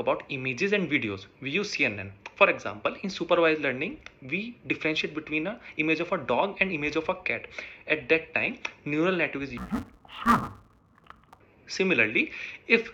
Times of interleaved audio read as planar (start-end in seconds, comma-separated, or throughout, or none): 9.57-11.41